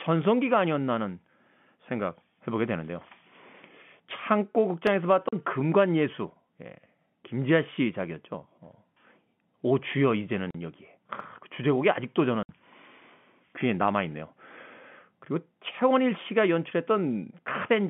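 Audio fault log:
4.87 s and 11.2 s, repeated buffer: a brief click-like stutter at each point, where audio arrived late and the output replayed its last chunk once more. The repeated piece is about 5 ms long, which fits a 5 ms playback buffer, and the joins are abrupt.
5.29–5.33 s, 10.51–10.55 s, 12.43–12.49 s, packet loss filled with silence: hard-edged dropouts of 40, 40 and 60 ms cut into the telephone-band speech. The receiver substituted silence for missing packets, and the durations point to 20 ms packets, with two, two and three lost.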